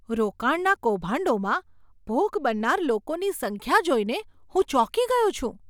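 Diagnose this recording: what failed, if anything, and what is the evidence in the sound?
Nothing in the chain has failed: the speech signal holds steady level and continuity throughout, with no dropouts, discontinuities, or distortion at any stage from capture to playback.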